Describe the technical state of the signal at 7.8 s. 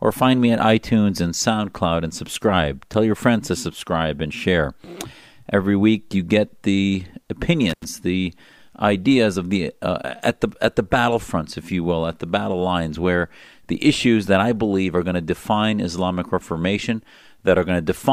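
At 7.8 s the speech is inside an intermittent contact fault running from 7.69 to 7.85 s. A loose connection briefly opens the line for about 86 ms. The sound drops out with crackle at each edge. On a waveform this shows as a near-flat gap bounded by sharp spikes, and on a spectrogram as a dark vertical band with bright broadband streaks at both ends.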